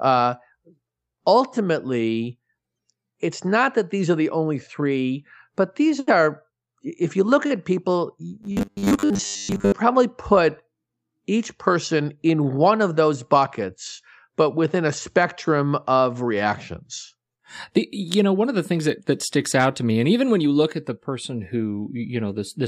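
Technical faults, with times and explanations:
8.43–9.72 s, robotic sound from repeated short buffers: just after "you look at people" until "probably put", the speech turns into a stiff metallic buzz at 100 Hz. Likely audio arriving too seldom, so playback loops a 10 ms chunk for most of that stretch and skips real audio.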